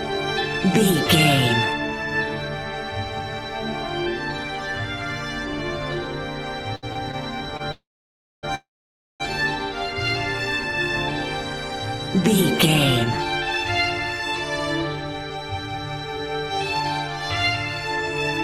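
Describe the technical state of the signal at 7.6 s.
At 7.57 to 7.62 s there is a short stall from a late packet: the jitter buffer ran dry, so the receiver held the last sound for about 26 ms until the packet arrived, then resumed where it left off. Nothing is lost, but that moment drags briefly with a slight buzz or dip, and playback runs 26 ms later afterwards.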